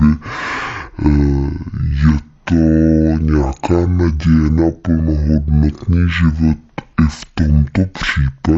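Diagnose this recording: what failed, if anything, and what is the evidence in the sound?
The speech runs at half speed and sits a full octave low throughout, drawn out and heavy, with a faint mirrored image of the sound in the upper half of the spectrum. This is a stereo read as mono fault at the sample-format stage. The interleaved left and right samples were taken one after another as a single channel, so each stereo frame became two consecutive samples. That doubles the duration and drops the pitch by 12 semitones.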